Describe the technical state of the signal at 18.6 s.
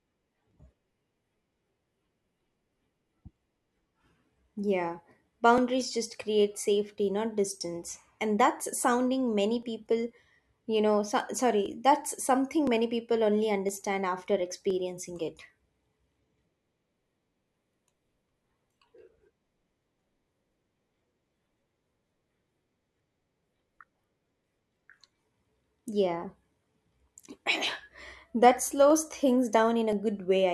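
At 18.6 s the speech sits inside periodic USB or driver dropouts running from 0.51 to 29.93 s. Around 10 ms of audio is skipped every 1.01 s, producing regular ticks. Spectrograms show evenly spaced thin vertical broadband lines, and the waveform shows abrupt jumps.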